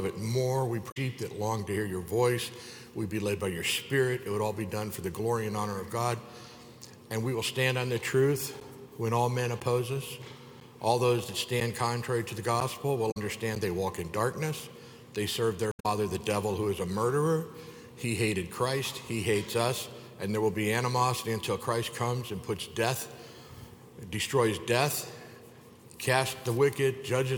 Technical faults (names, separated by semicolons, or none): damaged data in a compressed stream; periodic USB or driver dropouts